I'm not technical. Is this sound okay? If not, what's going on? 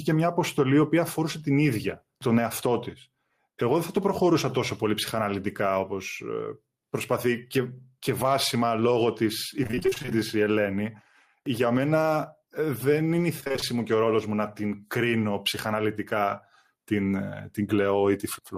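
No. Throughout the clip there is gain pumping: the level is pulled down on every loud sound, so loud and soft parts end up closer in level and the sound is squashed. It sounds like a volume knob being turned by hand, most likely because the microphone level was set far too high and an automatic limiter keeps pulling it back.

From 9.63 to 10.12 s, right after "και βάσιμα λόγω της", and again from 13.40 to 13.64 s, between "είναι η" and "μου και ο ρόλος", you hear repeated packet loss (robotic sound). Bits of the audio went missing in rapid succession, and each hole was patched by stretching the last sound. That is why it turns choppy with pieces missing, and nearly half of each stretch is patched.

Immediately after the first choppy patch, from 10.15 to 10.53 s, there is a jitter buffer slow-down. Nothing is missing and it isn't robotic. The speech simply runs at about 92% speed while the pitch stays the same, so the sounds feel drawn out as the receiver builds up a small reserve.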